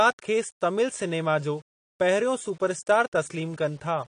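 Speech runs the whole clip with a gritty, signal-following grain, likely low bit depth without dither: the error sits roughly 35 dB below the speech and fits 8-bit rounding. A spectrogram shows a noise floor that rises and falls with the speech. The speech is also dull, smeared and warbly throughout, with plainly audible damage from what is likely AAC compression at a low bitrate, around 40 kbps for AAC-LC. A spectrogram shows a hard ceiling with nothing above 10.1 kHz.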